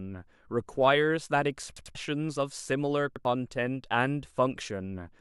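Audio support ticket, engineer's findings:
Repeated buffer at 1.77–1.95 s and 3.16–3.25 s: same 93 ms piece replayed (three plays, then two) with hard joins, a stutter that drops roughly 200 ms and 100 ms of speech. Playback underrun, consistent with a 4096-sample buffer.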